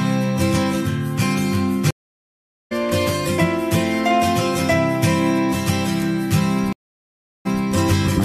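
At 1.91 s the sound drops out for about 0.8 s, then comes back at 2.73 s roughly a second further along. That's a stream reconnect: the connection broke, the player reconnected and spun up a fresh decoder mid-stream, so a chunk is simply skipped. It happens again from 6.73 to 7.64 s with about 0.73 s of silence, but this time it resumes 186 ms earlier, so you hear a short stretch twice as the server resends a burst.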